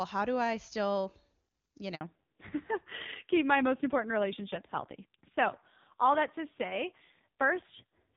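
Handover gap, 1.95 to 2.01 s. For 60 ms the speech drops out completely. The call was being passed from one network link to another, and no speech frames reached the receiver while the switch took place. The sound fades within a few tens of milliseconds and stays silent until the new link delivers its first frame. Whatever was said in that short window never reaches the listener, so the gap cuts straight through the speech.

Fallback to narrowband, from 2.01 s to the end of the clip. Up to the handover, the speech has the fuller top end of the HD Voice wideband codec. From this point everything above 4 kHz is gone. After the switch the call continued on an older narrowband codec. Its coarse, rough texture is consistent with a low narrowband rate, likely around 5.9 kbit/s. Sibilants lose their crispness, and the voice turns muffled and raspy for the rest of the clip.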